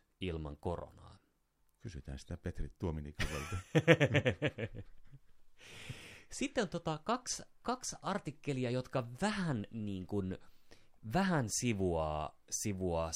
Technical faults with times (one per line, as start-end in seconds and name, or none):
none